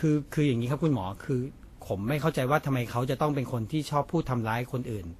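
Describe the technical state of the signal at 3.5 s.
At 3.5 s the speech carries the same damage heard across the whole clip. It is likely transcoding between lossy codecs. The sound points to a low-rate Vorbis encode, around 36 kbit/s, later re-encoded as WMA at about 64 kbit/s. The second encoder wastes bits copying the first one's artefacts and adds its own. Both textures sit together. Nothing remains above 14.2 kHz, so the top end sounds dull.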